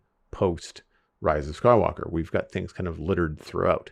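A speech recording marred by what is likely a drift correction step: clock-matching software appears to have adjusted the playback rate in one jump instead of by tiny amounts. From 1.33 s to 2.30 s the speech runs about 5.9% slow, with pitch dropping by roughly 106 cents, a little over a semitone, so the voice sounds suddenly detuned and sluggish. Normal speed and pitch return at 2.30 s, just before "got things kind of".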